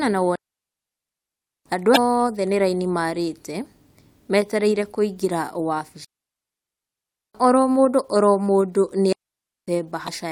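A digital wireless dropout, where the link loses too much data and the receiver mutes, leaves clean near-silent holes in the speech from 0.36 to 1.66 s and from 6.05 to 7.35 s, just before "oro mũndũ oro mũndũ". A shorter one runs from 9.13 to 9.68 s, right after those words, with no noise burst either side. Damaged data in a compressed stream makes the decoder lose frame sync, producing brief glitches from 1.93 to 1.97 s and from 10.05 to 10.09 s.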